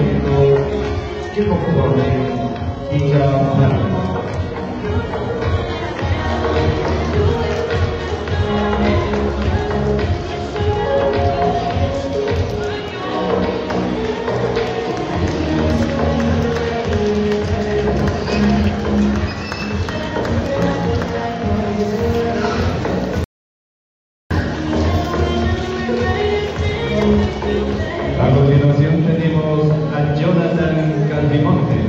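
For the first 6 seconds you get an adaptive stream starting at a low bitrate: the top end sounds thin and synthetic, with nothing above 11 kHz and stronger codec artefacts that point to something like 12 kbit/s HE-AAC. At 6.0 s it jumps cleanly to a fuller rendition, around 96 kbit/s AAC-LC.

Then at 23.24 s there's an audio dropout to silence lasting 1.07 s, through 24.31 s. It's plain silence with no room tone, and the sound resumes mid-flow, most likely from the input link briefly dropping while the encoder kept writing.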